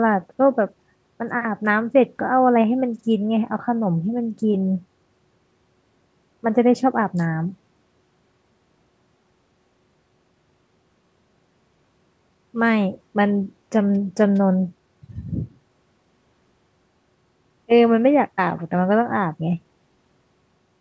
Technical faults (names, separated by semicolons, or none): none